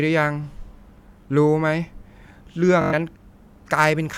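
Speech with a Bluetooth stutter from 2.82 to 2.94 s: lost packets make a short slice repeat as a buzz, then speech resumes further on, unlike a silent dropout.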